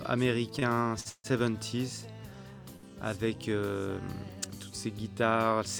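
From 0.59 to 1.27 s there's a run of repeated stalls, a stutter: packets kept showing up late, the jitter buffer drained four times, and the receiver padded about a quarter second with stretched sound, the longest hold 150 ms, so it drags and hiccups without losing anything.

Then at 2.76 to 2.91 s comes a short stall from a late packet. One packet arrived 68 ms behind, the buffer ran dry, and the last bit of sound was held for 68 ms before picking up where it left off, giving a brief smear with a faint buzz or dip.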